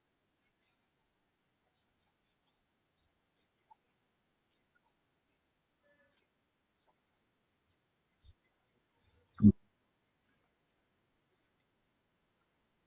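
No technical faults can be heard anywhere in this speech recording. Nothing interrupts or disturbs the audio at any point.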